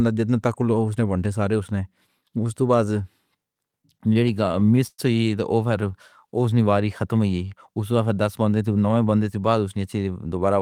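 From 3.71 to 5.00 s the speech shows repeated stalls (stutter). Packets arrived late, so the jitter buffer ran dry 13 times. The receiver stretched the last sound across each wait, the longest 116 ms, adding 240 ms in all. No audio is lost, but the passage drags and stutters.

Between 5.81 and 6.56 s, just before "نی واری ختم ہوئی", a jitter buffer slow-down is audible. The buffer was low, so the receiver repeated single pitch periods to rebuild its reserve, adding 70 ms. Delivery runs at 92% speed at unchanged pitch, with drawn-out sounds.

From 8.61 to 8.97 s, after "دس بن گئے" and before "بندے سے بعد اس", there is a jitter buffer speed-up. The buffer held too much audio, so the receiver cut short pitch-period pieces, about 50 ms in total. The speech runs at 113% speed at the same pitch and sounds hurried.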